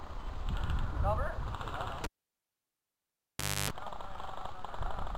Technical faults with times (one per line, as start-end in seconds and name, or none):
2.04-3.70 cable pulled and plugged in
3.88 audio missing between chunks